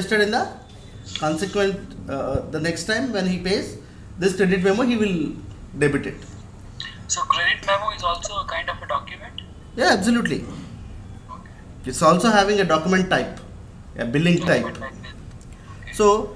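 A sharp pop cuts through the audio from 2.35 to 2.38 s, and a quick double pop follows from 14.47 to 14.55 s, each jumping roughly 10 dB above the surrounding level while the sound carries on underneath. These are loud pops, likely caused by a sudden voltage spike or step from a plug, switch, static discharge or driver glitch, which the downstream circuitry turned into a brief thump.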